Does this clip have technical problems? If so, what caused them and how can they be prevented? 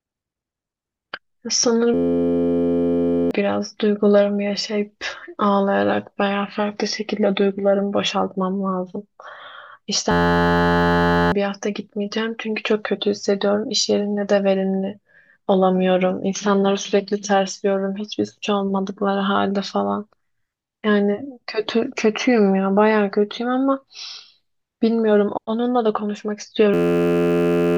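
Yes. At 1.94 to 3.31 s, 10.11 to 11.32 s and 26.74 to 27.77 s the speech is replaced by a steady, droning buzz at about 86 Hz, costing roughly a second and a half, then about a second each time. This is a system hang loop: the computer stalled while the audio hardware kept replaying one 11.61 ms slice of its ring buffer, which fits a 512-sample buffer. To prevent it, keep the audio thread unblocked and use a watchdog that mutes the output when the buffer stops being refilled.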